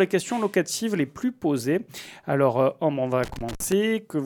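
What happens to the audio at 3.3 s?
At 3.3 s the sound is inside a burst of loose connector crackle. It runs from about 3.23 s to 3.72 s, roughly half a second. A worn or dirty contact in the signal path is making and breaking as it shifts. Each break chops the signal. Any DC on the line turns those breaks into pops. The result is an irregular, scratchy crackle laid over the audio for that stretch.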